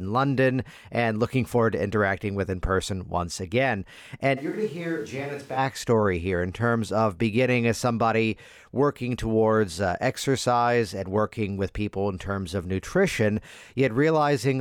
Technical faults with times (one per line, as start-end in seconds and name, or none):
4.39-5.56 switch to a distant microphone